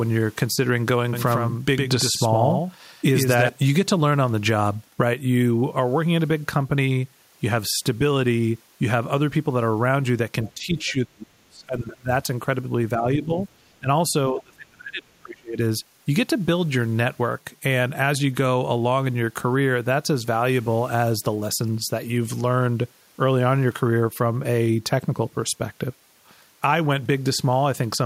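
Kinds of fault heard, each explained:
Doubled audio track: From 1.13 to 3.49 s a second, full-band copy of the speech runs about a tenth of a second behind the original and roughly 5 dB quieter. The result is a hard, flam-like doubling with no reverberant tail or room colour. It switches in and out abruptly at both ends. The likely cause is the same signal being captured twice, once through a slower path, and mixed back in out of step.
Other side's voice leaking through: A faint second voice breaks through at 10.47–10.52 s and again at 10.78–10.91 s. Both scraps are short, sitting far below the main talker, around 25 to 30 dB down. This is likely loudspeaker playback of the far end reaching the microphone and surviving an echo canceller that did not fully remove it.
Speech suppressed in double talk: The talker's level drops while the other side is active, at 10.54–12.1 s, 12.97–13.31 s, 13.79–13.88 s and 14.3–15.59 s. 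The two longer stretches are pushed down by as much as roughly 35 dB, so the speech nearly vanishes. The shorter dips are shallower, one only around 10 dB. The likely cause is an echo canceller that treated overlapping talk as echo and turned the near-end speech down along with it.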